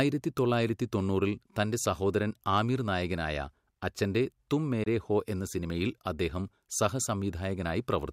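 A single audio packet, most likely, failed to reach the headphones in time over the Bluetooth link and was discarded, which produced a Bluetooth dropout from 4.83 to 4.87 s in this speech. With nothing to play, the output falls silent, leaving a brief hole with abrupt or briefly faded edges. About 23 ms of sound goes missing, which fits one lost packet. When the speech comes back, it has moved on, as though it kept playing through the gap.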